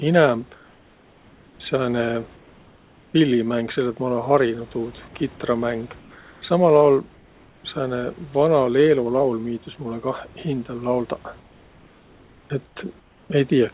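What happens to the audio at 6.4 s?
At 6.42 s a stretch of comfort noise in place of the background ends; from 6.0 s the real room sound gave way to steady, featureless noise about 2 dB quieter, likely discontinuous transmission. Unlike a dropout, the pause never goes silent.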